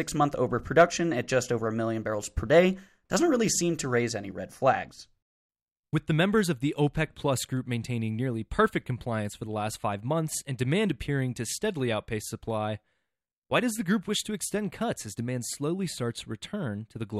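No technical faults can be heard anywhere in this recording.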